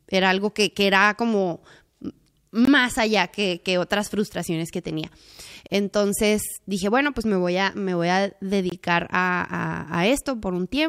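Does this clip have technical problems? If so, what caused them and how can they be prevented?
Yes. Gap between chunks: roughly 21 ms silences at 2.65–2.67, 5.67–5.70 and 8.70–8.72 s, one every 3 s, where codec padding or late chunk start interrupts the joins. Prevent it by trimming codec padding and scheduling each chunk to start exactly where the previous one ends.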